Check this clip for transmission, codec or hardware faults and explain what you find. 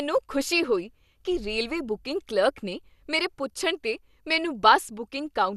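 There's one fault, running through the whole speech clip: likely MP2 compression. Nothing comes through above about 12.2 kHz, and the sound is dull and gurgly because upper sub-bands keep dropping out and what survives is coarsely quantised, which fits a low bitrate around 80 kbps.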